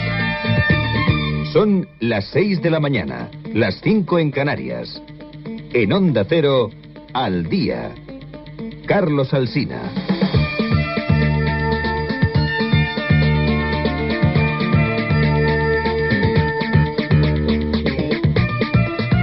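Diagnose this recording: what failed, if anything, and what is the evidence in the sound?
Nothing stood out on listening that would point to a failure at any stage of the chain.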